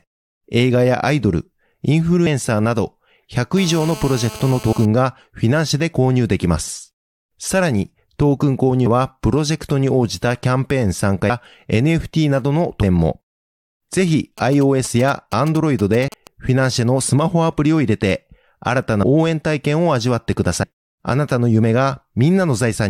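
Compressed frames skipped first appear at 2.25 s. The decoder jumps past whole frames of about 23 ms each, a length that fits a 1024-sample frame at 44.1 kHz. Here it loses somewhere near 70 ms of speech. The frames overlap at their edges, so the join is a short smeared blip rather than a sharp click, and the speech seems to lurch forward.

GSM phone buzz runs from 3.57 to 4.86 s. A 2G handset in a call sends radio bursts about 217 times a second, and the audio circuitry rectifies them. The result is a hard, raspy buzz at 217 Hz, rich in harmonics and unrelated to the speech, sitting about 17 dB below it. It stays nearly steady.

At 4.72 s, still under the buzz, another skip drops roughly a tenth of a second. The same smeared jump recurs at 8.85, 11.29, 12.82, 16.07, 19.02 and 20.62 s. Each one loses something between about 100 and 200 ms, a few frames at a time, and the longest gaps are at 8.85, 12.82 and 16.07 s.

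GSM signalling bursts occupy 14.38 to 16.27 s, about 15 dB below the speech. They come from a nearby 2G phone sending only brief groups of bursts, the kind it sends before a call or text arrives. Once rectified, these groups make a galloping dit-dit-dit of short 217 Hz buzzes. The skip at 16.07 s falls inside this stretch.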